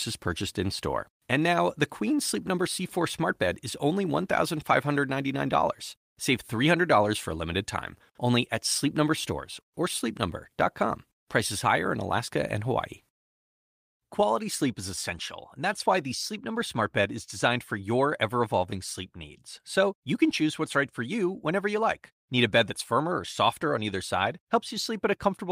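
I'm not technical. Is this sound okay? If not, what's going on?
Yes, nothing in this recording stood out as a problem on listening.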